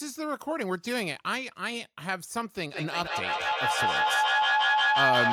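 From 2.7 s to the end, each word comes back at about 0.15 s intervals, thinner and ringing, with repeats building to about 5 dB above the speech. This is feedback echo between two devices: a second device's loudspeaker reaches this microphone, outside its echo canceller's reach.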